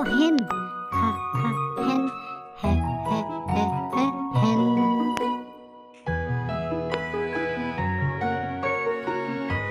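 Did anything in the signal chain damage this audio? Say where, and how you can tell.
Yes. There are loud pops, likely from a voltage step in the analogue wiring, such as a plug, switch or static discharge. A double pop sits between 0.39 and 0.53 s, peaking about 15 dB above the signal. Single pops follow at 5.17 to 5.19 s and 6.94 to 6.96 s, each about 20 dB above. The sound carries on underneath each one. That shows a pulse added on top of the signal.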